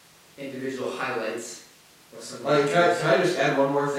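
From about 1.01 s to 3.01 s there are periodic USB or driver dropouts, one each second, so three in all. Each skips a tiny slice of audio, well under a millisecond, with nothing filling the gap. That makes a regular tick in the speech, the kind you get when a background task briefly stalls the bus.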